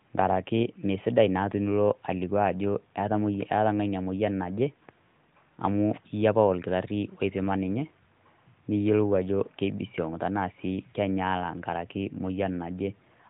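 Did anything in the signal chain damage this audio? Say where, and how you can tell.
No, nothing in the signal chain damages this speech. It has passed through the AMR narrowband mobile codec, heard as a band limit near 3.8 kHz with only light coding texture, which fits the 12.2 kbps mode working as designed.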